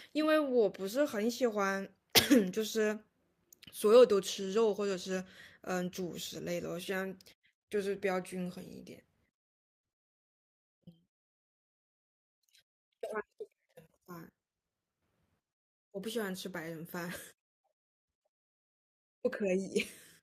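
Nothing technically wrong turns up anywhere in this speech recording, so there's no fault to time or trace to a cause.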